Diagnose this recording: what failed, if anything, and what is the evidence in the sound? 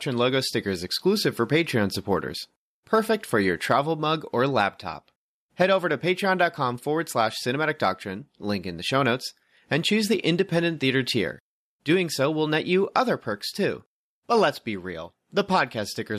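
Nothing in the speech recording points to a failure at any stage between capture and playback, and the signal stays steady and continuous throughout.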